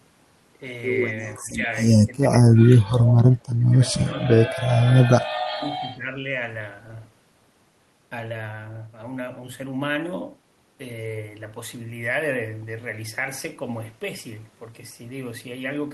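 From 1.39 to 1.67 s the speech sags, then dips again briefly at 2.05 to 2.12 s and more deeply from 2.66 to 3.09 s. These are speech suppressed in double talk, likely from an echo canceller that could not tell its own talker from returning loudspeaker sound and turned everything down. The level falls by roughly 15 to 20 dB. The same ducking returns at 3.58 to 3.73 s, 4.09 to 4.75 s and, longest at well over half a second, 5.51 to 6.36 s. The voice itself gets quieter or breaks into pieces, and nothing extra is added.

Overlapping the end of the third dip, from 2.99 to 3.14 s, there is an echo leak. A faint copy of the voice trails 376 ms behind, sitting about 15 dB below the direct speech, likely because the far end's canceller let some of its loudspeaker pickup through. What sets it apart is that extra, delayed sound is laid on top of the speech, rather than the speech being pulled down.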